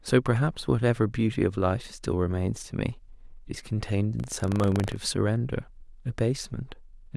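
From 4.16 to 4.97 s the speech takes on a robotic rattle at a steady 25 Hz, the sign of buffer tearing. The writer and the hardware reader of the ring buffer have slipped out of step, so each period holds a small slice of audio from roughly 70 ms earlier, joined hard on both sides. Unlike dropouts, there are no silent gaps; the buzz rides only on the speech and holds a fixed rate.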